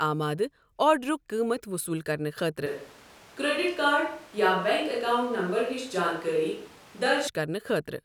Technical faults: switch to a distant microphone

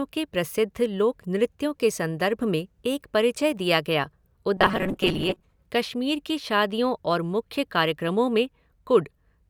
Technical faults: robotic sound from repeated short buffers

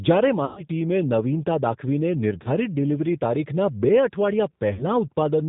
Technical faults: G.729 codec; VoIP packet loss concealed by the speech codec

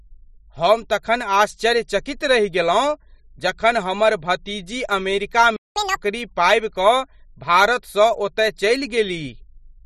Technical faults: playback stall; catch-up at higher speed

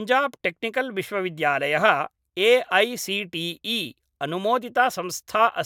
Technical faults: none

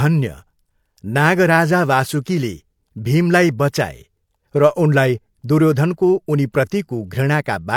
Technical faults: low-bitrate audio saved at a high bitrate

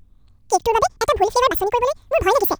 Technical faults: audio read two samples at a time (double speed)

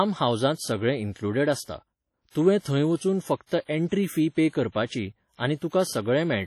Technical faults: WMA compression; pre-echo

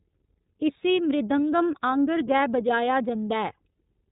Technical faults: iLBC codec

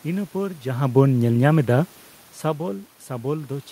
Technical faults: none

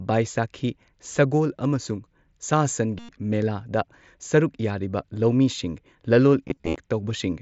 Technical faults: concealed Bluetooth headset packet loss

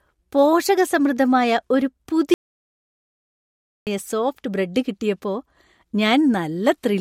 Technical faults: playback stall

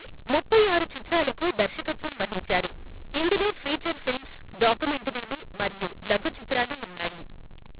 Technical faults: mu-law and A-law mixed up

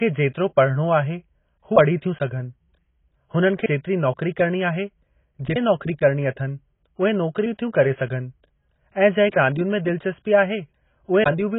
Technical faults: AAC compression

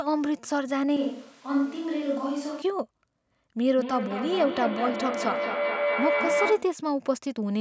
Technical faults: switch to a distant microphone; feedback howl

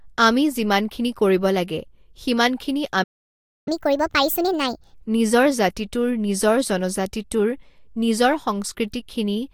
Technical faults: playback stall; catch-up at higher speed

